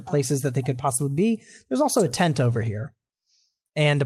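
A short speech recording, with no technical fault heard anywhere in it. There is nothing to time, measure or trace to a cause.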